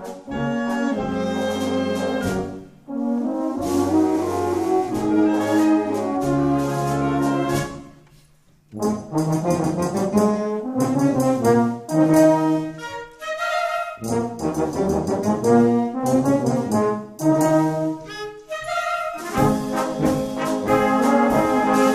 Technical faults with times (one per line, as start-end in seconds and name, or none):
none